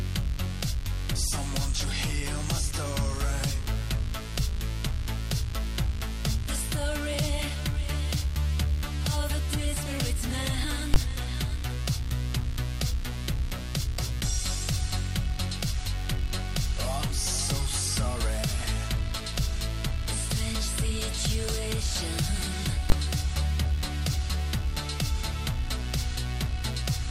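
At 10.94 to 10.96 s and again at 22.9 to 22.92 s there is a sharp bang from invalid numbers at full scale. A calculation produced invalid values, and the output pinned at one extreme value for 20 ms each time. Unlike a small digital click, this sits far beyond the audio's peaks and is too short to hear as two separate pops.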